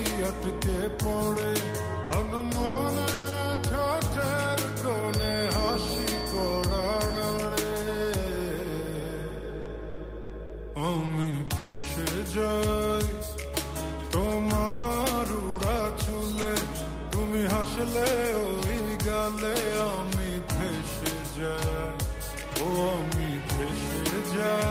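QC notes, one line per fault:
2.03–3.61 s, 9.62–11.86 s and 14.66–16.46 s, repeated packet loss (robotic sound): packets kept arriving late or not at all, and the receiver patched each hole by extending the sound just before it. The first run has 6 gaps totalling 340 ms, longest 100 ms, with 22% of the span filled in. The second has 8 gaps totalling 320 ms, longest 80 ms, 14% filled. The third has 3 gaps totalling 260 ms, one lasting 180 ms, 14% filled. Those stretched-out fragments interrupt the sound so often that it turns choppy, with pieces missing. In the first two runs, roughly a tenth of a second of the filled-in material comes back in rebuilt form, and somewhat less does in the third.
5.03–7.47 s, feedback whistle: a thin, steady tone at 4.6 kHz sits about 15 dB under the main sound and swells and fades slowly in level. The likely cause is a loudspeaker-to-microphone loop running right at the edge of feedback. 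That loop keeps one high frequency ringing without letting it build into a howl.
11.58–11.87 s, long network dropout: a 260 ms block of audio never arrived, and the whole of it was filled in. The likely cause is a network interruption. It lands at the tail of the second choppy run. There is no true silence here, only the last sound carried on as a decaying buzz or hiss before the real audio resumes, minus what was lost.
17.62–17.67 s, short concealed packet loss: 20 ms never reached the decoder in time. The receiver continued the preceding sound across the hole and blended back into the real signal. The result is a brief smear or wobble rather than an audible gap.
17.64–17.66 s, lost packet rebuilt from error correction: the 20 ms frame inside that moment was rebuilt from the low-bitrate copy carried in the following packet, so nothing drops out. The rebuilt frame sounds rougher and noisier than its neighbours.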